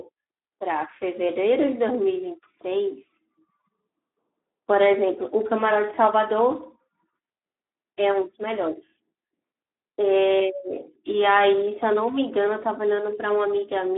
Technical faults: Speex codec

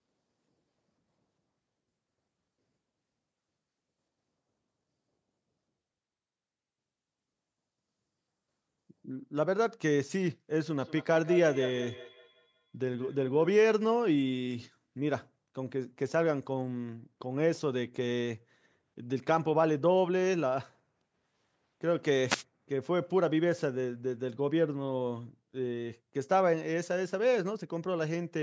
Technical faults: feedback echo between two devices; wireless microphone noise hit

